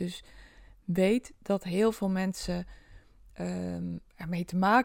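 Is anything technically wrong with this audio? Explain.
Yes. At 2.52 s the speech has a DC step: the waveform's zero line jumps by about -40 dBFS, then drains away through a 5 Hz high-pass, producing a brief low thump.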